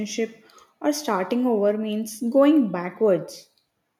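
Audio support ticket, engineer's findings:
Listened through the speech recording at normal level and nothing stood out as a problem.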